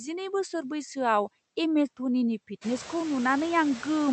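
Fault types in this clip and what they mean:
noise suppressor artifacts: The background noise drops away between phrases and comes back up under the speech. The effect is more obvious after about 2.5 s, when the room noise rises by roughly 18 dB. A suppressor estimates the steady noise in each frequency band and turns those bands down frame by frame, here by about 14 dB. As its estimates shift, the leftover noise keeps changing.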